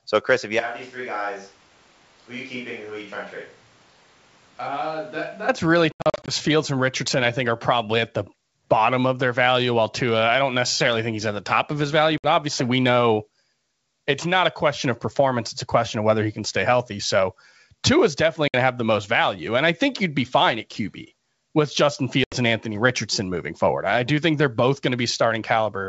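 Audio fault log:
0.6–5.48 s, switch to a distant microphone: Right after "if you" the sound turns roomy and hollow. The low end thins out, and the level drops by roughly 10 dB. Background noise rises to sit only some 25 dB under the speech. Both changes are abrupt at each end. This most likely means the close microphone dropped out and a far one took over, picking up more room and less direct sound.
5.92–6.34 s, 12.18–12.27 s, 18.48–18.55 s, 22.24–22.35 s, packet loss on an ADPCM call: Hard-edged silent holes cut into the speech. The first is a scattered cluster with 220 ms missing over 360 ms, the longest gap 80 ms. The second falls between "top of his value" and "obviously we know" and loses 60 ms. The third falls between "is definitely" and "to have the most" and also loses 60 ms. The last loses 80 ms. After each hole the adaptive decoder is out of step with the sender, so the sound returns slightly distorted before settling. 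The G.722 wideband coding underneath shows faint or no damage of its own.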